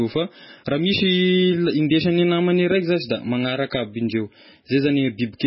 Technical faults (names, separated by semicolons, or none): MP3 compression